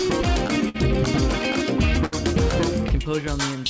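Small timing hiccups recur through the whole clip at uneven intervals, with brief bits of sound repeated or held. This is clock drift between sender and receiver: the sending side's clock runs roughly five percent slow, so the receiver's jitter buffer keeps draining and has to pad the sound with repeated pieces. The audio carries nothing above 8 kHz, which fits a G.722 call codec at 64 kbps.

From 0.69 to 0.76 s the sound hangs on itself, stretched with a slight buzz or dip, then continues with nothing skipped. From 2.06 to 2.14 s the same thing happens slightly longer. Both are a short stall from a late packet: the data didn't arrive in time, the buffer ran empty, and the receiver stretched the last sound to cover about 55 ms and then about 64 ms before resuming at the same point.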